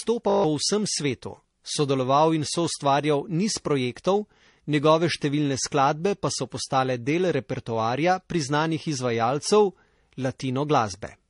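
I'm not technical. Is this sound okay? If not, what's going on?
No. A system hang loop hits from 0.3 to 0.44 s. The computer briefly froze while the sound hardware kept replaying the same 20 ms scrap of audio, about seven times. That makes a short buzz at 50 Hz, and roughly 0.15 s of speech goes missing.

Transcoding between lossy codecs runs through the whole clip. The speech sounds dull, with nothing above 10.6 kHz. The likely cause is that it was compressed in one format and then squeezed again in another, such as MP3, so the damage from both layers stacks up.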